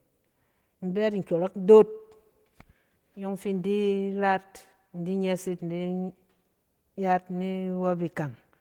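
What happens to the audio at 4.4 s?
At 4.4 s the speech passes through intact, with nothing breaking into it.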